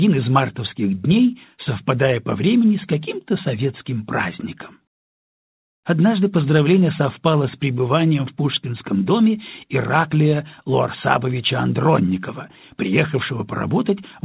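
No technical faults are audible; the audio carries the narrowband character of a call path, with nothing above about 4 kHz, which fits a G.711 mu-law connection at 64 kbps.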